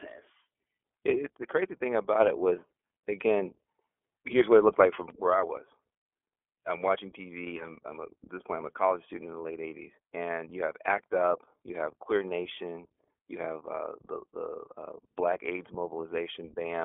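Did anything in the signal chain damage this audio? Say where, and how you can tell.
Yes. The damage comes from the codec stage and lasts the whole clip. This speech has been through the iLBC codec. Nothing survives above about 3.6 kHz, and the band sits close to a 300 to 3400 Hz telephone line. The codec damage is plainly audible, and the voice sounds a little rough and synthetic. iLBC codes each frame's excitation on its own, without leaning on the previous frame. The grain suggests 30 ms frames, which fits the 13.33 kbps mode.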